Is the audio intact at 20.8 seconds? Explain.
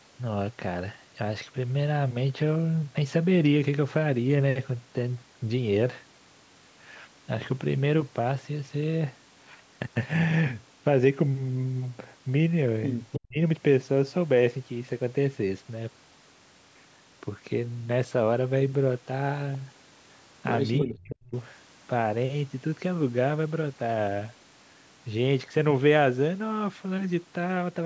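No. From 20.78 to 20.85 s there is an echo leak. A short, delayed copy of the speech comes back about 305 ms late and roughly 10 dB below the main level. It is likely a loudspeaker on the far end whose echo canceller let part of its microphone pickup through and sent it back. It sounds like a brief ghostly repeat.

Overlapping it, from 20.81 to 21.34 s, the speech is suppressed in double talk. The level falls sharply, dropping by around 40 dB at its deepest, for about half a second. This is likely the echo canceller turning everything down while both sides talk, because it cannot tell the local talker from the returning echo. The speech dips away and partly vanishes.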